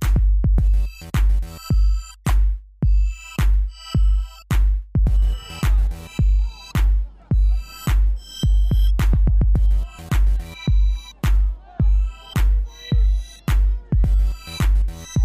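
At 2.25 s, a short run of compressed frames reached the decoder with flipped bits, and it played them anyway: a corrupt frame decoded. Misread gains and codes in those few frames sent energy to the wrong frequencies, so for about 50 ms, to 2.30 s, the sound is replaced by spurious content peaking around -15 dBFS. It comes across as a brief chirp, squeak, blip or burst of noise, or possibly a short hole, lasting as long as the damaged frames.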